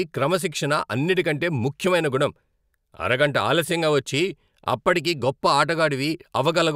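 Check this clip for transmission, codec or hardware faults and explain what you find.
I find no faults in this clip.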